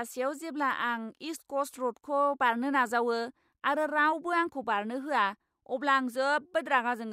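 A short speech recording with no technical fault to point to. Nothing at any moment calls for a time or a cause.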